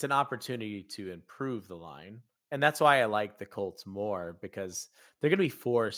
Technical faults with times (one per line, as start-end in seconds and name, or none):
none